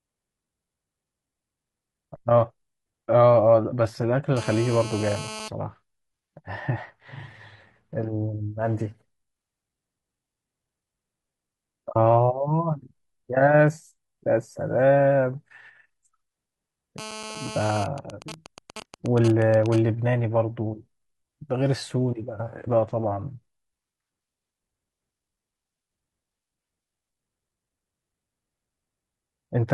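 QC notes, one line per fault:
4.37–5.48 s and 16.98–17.82 s, GSM phone buzz: a hard, raspy buzz at about 217 Hz with a dense stack of harmonics, sitting about 14 dB below the speech and unrelated to it. A nearby 2G phone on a call transmits radio bursts at 216.7 Hz, and the audio circuitry rectifies each pulse into this buzz.
17.82–19.78 s, GSM signalling bursts: directly after the second buzz, the sound turns into even ticks with a longer 217 Hz buzz twice a second, roughly 15 dB under the speech. The phone is still in its call, but its user has gone silent, so it sends only sparse groups of bursts, and the audio path rectifies each group.
22.64–22.68 s, stream segment skipped: a small blip where the audio abruptly jumps ahead, with a discontinuity in the speech. The likely cause is a segment of the stream that failed to load, so the player moved on to the next one and that part of the programme is missing.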